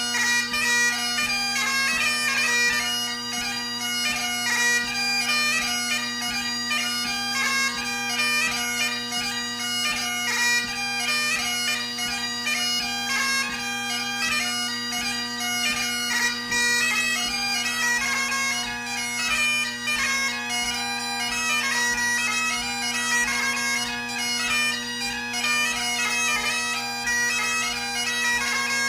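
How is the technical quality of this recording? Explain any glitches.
There's one clear glitch. From 15.96 to 17.96 s the adaptive stream drops to a lower bitrate. The connection likely slowed, so codec artefacts rise, with a sudden change in quality and no gap, sounding roughly like a step down from 64 to 24 kbit/s.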